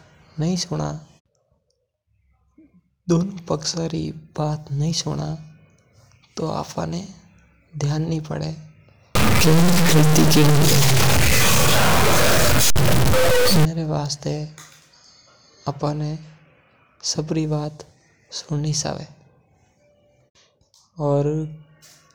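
From 9.15 to 13.65 s, a stuck bit is the likely cause: one high-order data bit, with a step of around -10 dBFS, holds a fixed value, throwing many samples off by that amount. The speech turns harsh and buzzy, and pauses fill with loud noise.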